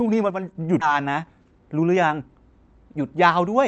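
One channel drops out from 0.30 to 0.55 s. The level falls abruptly by about 6 dB, likely because one stereo channel vanished before the mono sum.

Skip ahead at 0.81 to 0.83 s. Roughly 0.4 s of speech was discarded while later audio waited, so playback jumps forward with no gap filled.

Jitter buffer speed-up from 0.91 to 2.52 s. Repeated pitch-period cuts, about a fifth of a second in total, push speech to 111% speed at unchanged pitch, sounding hurried.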